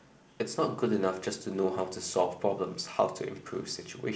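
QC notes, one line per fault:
No fault to log in this speech clip, so the QC notes have nothing to list beyond its normal G.722 wideband telephone coding.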